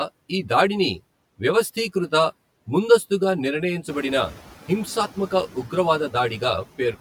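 Channel delay (comb filtering) runs through the whole clip. One channel arrives roughly 10 ms behind the other, and when the two are folded to mono, anything common to both cancels at evenly spaced frequencies: the first notch sits around 50 Hz, with further notches roughly every 100 Hz above it. The result is a hollow, phasey quality on the speech, as if heard through a tube, and it stays fixed from start to finish.

Noise suppressor artifacts are also present throughout. The suppressor pulls down each frequency band it judges to be steady noise, frame by frame, cutting that noise by about 16 dB. Between phrases the background sinks away, then creeps back up underneath the speech as bands open again. Around 4 s the room noise itself rises by about 10 dB, still sitting about 19 dB below the speech.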